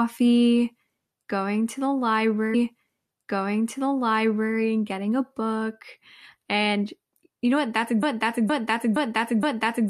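From 2.53 to 4.53 s a stream segment repeated: the player queued the same stretch twice, so about 2.0 s of speech plays again after a small blip at the jump back. On a spectrogram, that block of harmonics and formants appears twice in succession, identical.

From 8.03 s to the end, a broken-record loop takes over. A 0.47 s fragment repeats exactly, back to back, four times, likely because the stream stalled and kept resending its last fragment, and the speech that should follow is lost. The waveform shows identical envelopes at a regular spacing.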